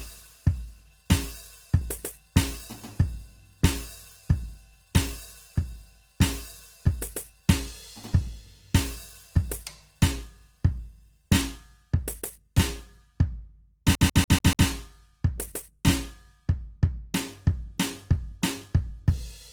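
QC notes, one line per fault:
throughout, Opus compression: tones sound grainy, rough and noisy; likely Opus in music mode at a low bitrate near 16 kbps, filling starved bands with noise.
13.95 to 14.68 s, CD stuck on one turn: the same 0.14 s snippet stutters five times with brief mutes, as the laser jumps back one track each revolution.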